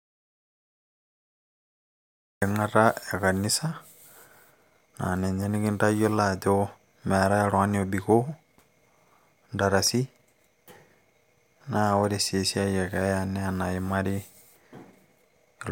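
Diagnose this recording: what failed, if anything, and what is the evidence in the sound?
The recording opens in an audio dropout to silence. From 0 s to 2.42 s the waveform is a dead-flat silent line, and the spectrogram is completely blank, with not even a faint noise floor or room tone. The speech then appears abruptly at 2.42 s, already mid-flow. Plain silence rather than a quiet room means the input signal itself was missing, most likely from a disconnected device, dropped link or stray mute, while the recorder kept writing.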